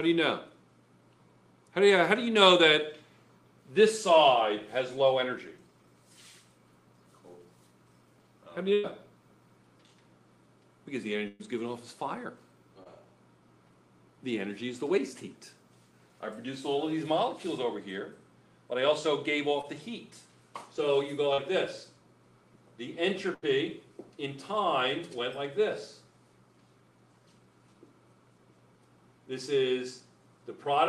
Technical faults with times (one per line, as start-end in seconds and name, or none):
8.73-8.86 burst of packet loss
11.28-11.41 burst of packet loss
12.83-12.87 short concealed packet loss
19.61-19.65 short concealed packet loss
21.33-21.40 short concealed packet loss
23.34-23.44 burst of packet loss